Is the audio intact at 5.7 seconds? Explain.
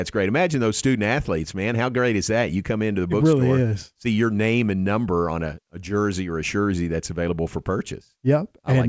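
Yes, the audio is intact at 5.7 seconds, with the speech carried cleanly through the call path, whose G.722 coding leaves nothing above 8 kHz.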